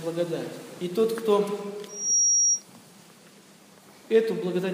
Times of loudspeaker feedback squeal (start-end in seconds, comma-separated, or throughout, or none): 1.88-2.64